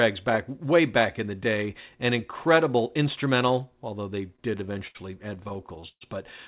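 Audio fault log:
4.36–4.97 s and 5.35–6.03 s, repeated stalls (stutter): packets reached the receiver late, so its jitter buffer ran dry again and again and the last sound was stretched to cover each wait. The first run has 7 stalls filling 147 ms, the longest 72 ms. The second has 9 stalls filling 202 ms, the longest 124 ms, about 30% of that span. Nothing is lost, but the audio drags and stutters, within a band that stops at 4 kHz.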